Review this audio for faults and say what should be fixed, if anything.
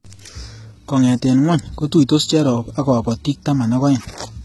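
Throughout the speech, the treble up to a hard ceiling at 11.8 kHz sounds bright but synthetic, and s sounds come out gritty and lispy. This is likely heavy HE-AAC compression, copying lower bands upward to rebuild the top, which fits a bitrate near 16 kbps. A plain low-pass would sound dull instead. Encoding at a higher bitrate, or with AAC-LC instead of band replication, would prevent it.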